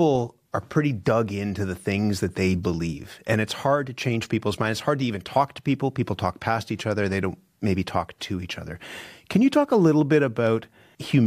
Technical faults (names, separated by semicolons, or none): none